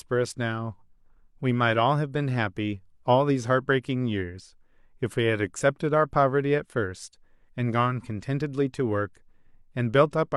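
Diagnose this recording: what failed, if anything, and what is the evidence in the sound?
Nothing failed here as far as I can hear; the speech comes through with no dropouts, glitches or distortion at any stage of the chain.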